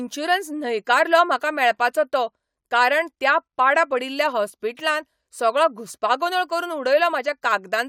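No technical faults can be heard anywhere in this speech recording. No working path is listed for it, so there is nothing further to describe.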